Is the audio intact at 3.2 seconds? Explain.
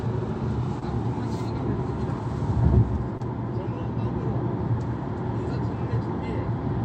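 No. A short concealed packet loss runs from 3.17 to 3.21 s. About 20 ms of audio arrived too late to decode. The receiver continued the preceding sound to fill the gap, then blended back. It comes through as a brief smear or wobble.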